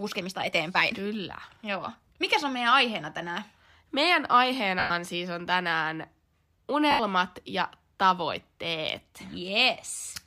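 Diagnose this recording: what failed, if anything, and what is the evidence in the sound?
A time-stretched section runs from 0.00 to 2.24 s: the speech moves about 1.35 times faster and sounds rushed, yet the pitch stays put. That points to a stage where software has likely squeezed the audio by dropping short pieces to meet a length.

Lost LE Audio frames cause dropouts at 4.79 to 4.90 s (110 ms), 6.91 to 7.00 s (80 ms) and 9.96 to 10.04 s. In each dropout, the speech turns into a noisy smear. This is a Bluetooth link fault in which the LC3 decoder is patching gaps with the last spectrum. The first gap fits about 11 lost 10 ms frames. The last is scattered over 80 ms, with its longest run around 30 ms.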